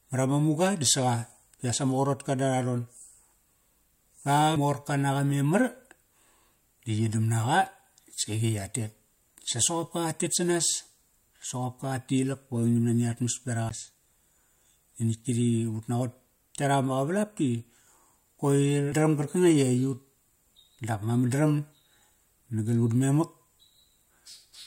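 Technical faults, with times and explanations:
13.69 s, CD skip: there's a quick tick and a dropout of roughly 15 ms, then the speech carries on from a different point on the disc. The laser got knocked onto another turn of the spiral, probably from a bump or a flaw in the surface, so the player briefly mutes while it loses its place. It then resumes wherever it landed, which is why the speech jumps instead of just pausing and picking up where it left off.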